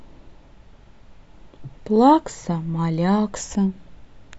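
A short stretch of speech, and there's nothing technically wrong to point to anywhere in it.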